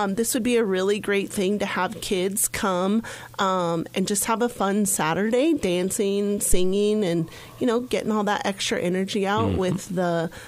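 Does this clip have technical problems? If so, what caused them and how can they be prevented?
Yes: a phantom power thump at 6.53–6.80 s, peaking about −9 dBFS and decaying within 62 ms. A supply step through the coupling capacitors causes it. Unlike a handling bump, it is a single clean low pulse. Switch phantom power only with the channel muted.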